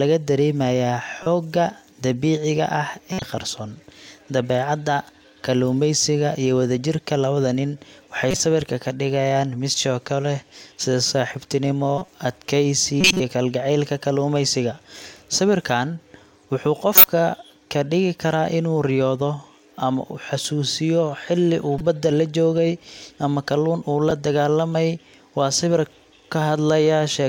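Eight bursts of corrupt frame decoded damage pepper this speech: 1.23–1.27, 3.12–3.26, 8.31–8.40, 11.98–12.12, 13.01–13.20, 16.94–17.08, 21.78–21.81 and 24.10 s. Each time, damaged bits in a few compressed frames got decoded anyway, so energy lands at the wrong frequencies and you hear short chirps or noisy blips. Half peak around -10 dBFS, but the ones at 13.0 and 16.9 s are about 10 dB louder than that.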